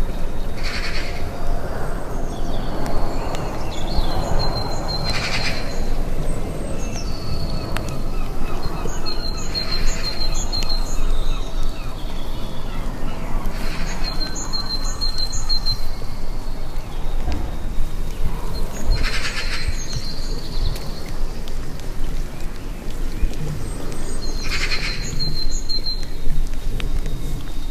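No technical faults can be heard anywhere in the recording.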